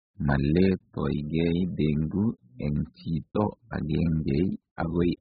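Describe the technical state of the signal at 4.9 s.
AAC compression damage is present at 4.9 s and across the whole clip. The speech has nothing above 5 kHz, leaving it dull and muffled, with a smeared, warbling texture on sustained sounds and sibilants. The likely cause is heavy AAC-LC coding at a bitrate that sounds like about 8 kbps. At that rate the encoder lowers its cut-off and leaves holes in the spectrum, so high frequencies vanish and the remaining detail wobbles from frame to frame.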